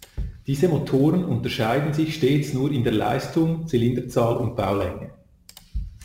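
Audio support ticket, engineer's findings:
Sample clock jitter, whole clip. Hiss and roughness riding on the speech. Worse on loud, bright passages, gone in pauses. Probable cause: unstable converter clock, timing wander around 10 µs. Error tracks waveform slope, sitting around 30 dB below signal.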